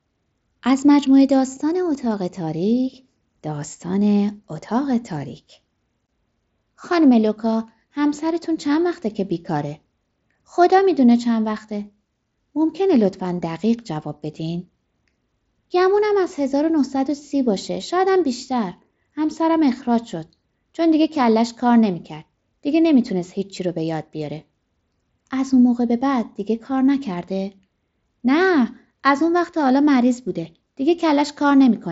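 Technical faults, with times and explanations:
No technical faults can be heard in this speech.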